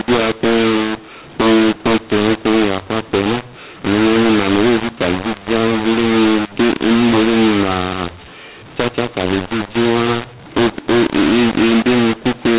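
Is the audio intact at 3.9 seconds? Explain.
No. At 3.9 seconds, as throughout, mu-law and A-law are mixed up: speech coded with mu-law is decoded as A-law, scrambling levels into harsh distortion and noisy pauses. Ordinary G.711 noise stays faint instead.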